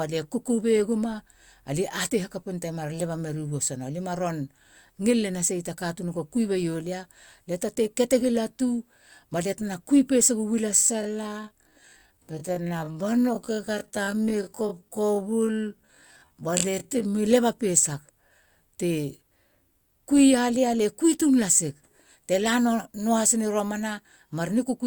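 A time-stretched section in this speech clip runs from 10.67 to 17.23 s, likely from software lengthening that stretch to fill time by repeating short fragments while holding pitch. Delivery drops abruptly to about 0.54 times normal pace, dragging, until normal pace resumes at "leba pesa".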